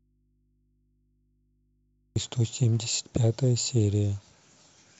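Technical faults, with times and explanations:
0.00 to 2.16 s, audio dropout to a faint residue: the clip opens with the speech already gone, leaving only a low mains hum sitting roughly 45 dB under the level the speech reaches once it snaps back abruptly at 2.16 s, with no fade-in. The likely cause is a lost connection or muted source ahead of a stage that stayed live, so the open input picked up hum while the wanted signal was absent.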